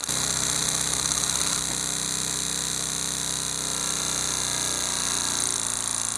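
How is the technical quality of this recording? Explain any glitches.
The recording has two technical faults: a low buzz that follows the signal's level and one brief glitch near the end.

Filter restarted on every block, throughout: the filter resets its state each block, so every block opens with a small transient, producing a 172 Hz buzz that fits a 256-sample block.

Damaged data in a compressed stream, at 5.55 s: corrupted bytes make the decoder misread frames and resynchronise, heard as a short glitch.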